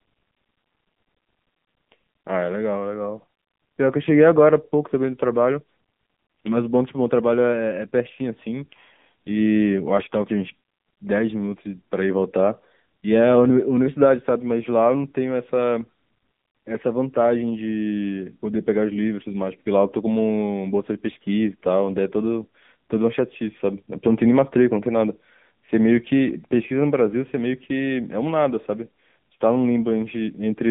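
From start to end the speech carries AMR narrowband mobile codec damage, plainly audible. Nothing passes above 3.7 kHz and the line band sits near 150 Hz to 3.6 kHz. The buzzy, synthetic pulse-driven voicing fits AMR-NB at around 8 kbps.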